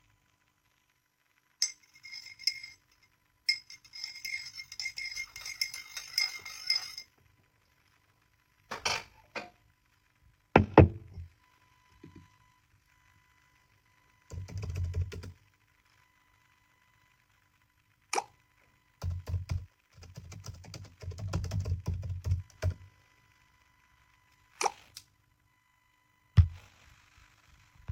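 Everyday sounds carry overlap-add ripple from start to finish: the level dips and swells by about 6 dB at roughly 50 Hz, a rough flutter. Unlike mains hum, nothing is added; the sound itself pulses once per frame, because the resynthesis overlap doesn't sum to constant gain.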